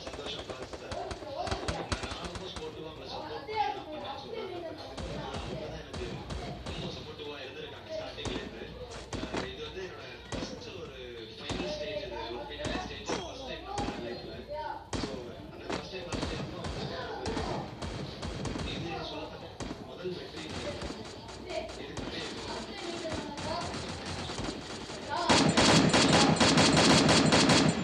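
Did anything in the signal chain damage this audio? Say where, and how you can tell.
No, nothing along the signal chain damaged this audio. Every stage from capture to playback passes the sound through intact, with nothing to point to at any moment in the clip.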